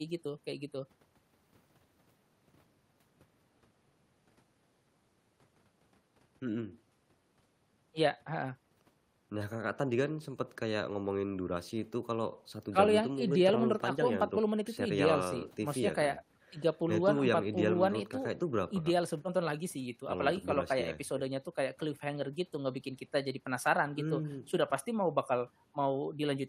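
Nothing stood out on listening to this recording.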